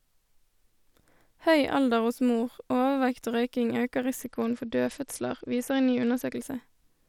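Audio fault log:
4.2 to 6.35 s, Bluetooth SBC bit pool drop: the top end suddenly goes dull and a gritty, grainy noise creeps in under the speech, then clears at 6.35 s. That's what you get when a congested link squeezes the SBC bit pool down hard, something like from 31 to 10, which fits a stream around 77 kbps. The highest sub-bands get starved of bits and the rest are quantised coarsely until the rate comes back.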